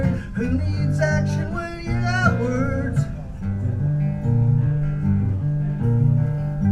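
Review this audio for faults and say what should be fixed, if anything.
Nothing here needs fixing, since no technical faults turn up anywhere in the recording.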